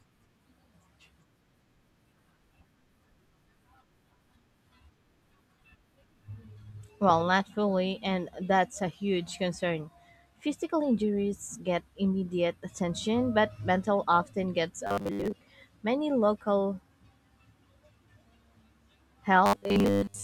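From 14.87 to 15.35 s and 19.46 to 20.23 s, speech turns into a rigid metallic buzz at 100 Hz. This is robotic sound from repeated short buffers, likely a 10 ms block replayed for most of each stretch. Spectrograms show flat harmonic lines every 100 Hz, and the waveform largely repeats.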